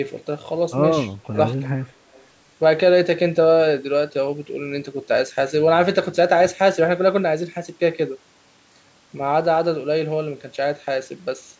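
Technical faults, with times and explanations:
1.32 to 1.38 s, speech suppressed in double talk: the speech dips by roughly 15 dB for a moment, likely because an echo canceller clamped down while both sides spoke at once.
1.85 to 1.91 s and 2.12 to 2.26 s, echo leak: faint scraps of the speech return about 275 ms late and very quiet, likely residual loudspeaker echo that an echo canceller failed to remove.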